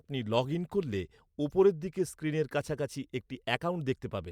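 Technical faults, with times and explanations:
No technical faults, with times and explanations, can be given, as none are present.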